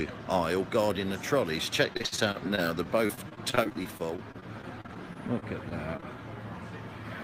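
From 1.93 to 6.06 s, repeated packet loss (robotic sound) sets in: about 33 short gaps, the longest 56 ms, each patched by extending the preceding sound, so the audio turns choppy, with pieces missing. A spectrogram shows frozen, smeared blocks with abrupt vertical edges.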